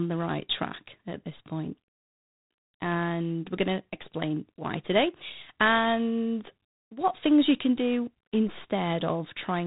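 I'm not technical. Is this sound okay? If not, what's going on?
No. The whole recording has G.726 ADPCM damage, the kind of coding older cordless and landline phone systems use. It stores each moment as a rough guess of how the sound changes, and here that guess is coarse, so a harsh, rasping hiss rides along with the speech. Unlike ordinary background hiss, it swells when the talking gets louder and fades in pauses. Everything above about 3.8 kHz is gone too, giving a muffled telephone sound.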